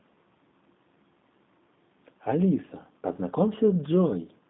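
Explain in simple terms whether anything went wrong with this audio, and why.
Throughout, the speech carries G.729 codec damage: a phone-call coder rebuilt it from a simplified model, leaving it rough, synthetic and empty above 3.8 kHz.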